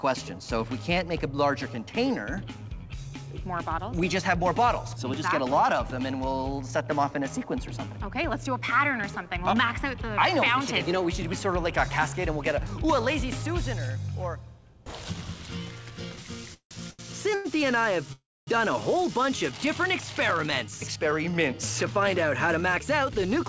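At 16.54 s the audio stops moving forward for about 0.19 s in a call audio freeze. The last sound carries on as a fading buzz and then drops to silence for roughly 100 ms before playback resumes exactly where it left off. The likely cause is packets held up in transit while the jitter buffer ran dry, so about 168 ms of gap is inserted and nothing is lost.

Two short stalls from a late packet follow, at 16.91–17.01 s and 17.35–17.47 s. In each, one packet was missing at its playout time and the receiver stretched the preceding sound to cover it: 81 ms in the first and 98 ms in the second. Each is heard as a sound held too long with a slight buzzy dip, then a clean continuation with no content missing.

A longer call audio freeze runs from 18.13 to 18.49 s. The held sound decays into about 260 ms of silence within a 345 ms filled gap, then the audio picks up from the same point. This pushes playback later by that full amount.

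Jitter buffer speed-up follows, from 20.47 to 21.92 s at about 108% and from 22.48 to 23.45 s at about 109%. The receiver cuts out many pitch-period-sized slices, removing around 150 ms in the first stretch and about a tenth of a second in the second. The pitch stays the same but the timing sounds rushed. Throughout, the G.722 wideband path at 64 kbps leaves nothing above 8 kHz.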